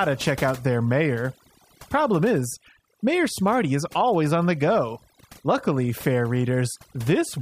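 Overdone noise removal runs throughout this speech recording: the noise reduction was set too hard, so narrow frequency bands near its noise estimate are pushed down or gated off, leaving a lowered background full of twinkling specks.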